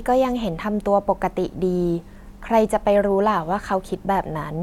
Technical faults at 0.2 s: none

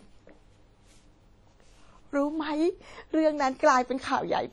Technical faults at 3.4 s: WMA compression

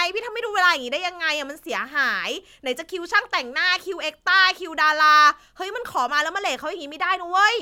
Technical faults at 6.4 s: none

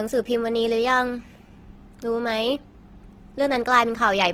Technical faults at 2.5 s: Opus compression

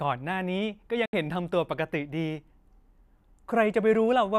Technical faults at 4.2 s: none

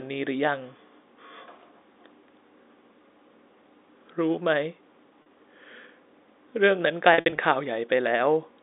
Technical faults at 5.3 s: packet loss with pitch repetition

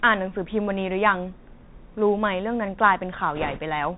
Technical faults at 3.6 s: Bluetooth CVSD headset codec; bit errors on a Bluetooth voice link

